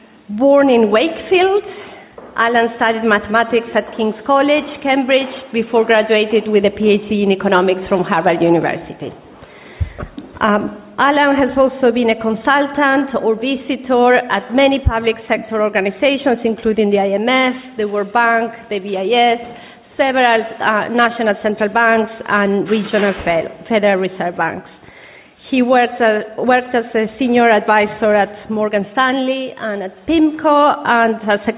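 Nothing in the audio stood out as a technical problem on listening.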